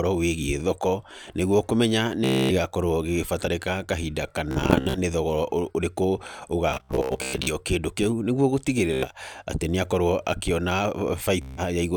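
Bluetooth stutter hits the speech at 2.24–2.52, 4.51–4.98, 6.71–7.53, 8.93–9.07 and 11.42–11.62 s. Late or lost packets make the receiver replay a tiny slice, giving a buzzy machine-gun stutter, worst around 6.7 s, and the speech then jumps ahead.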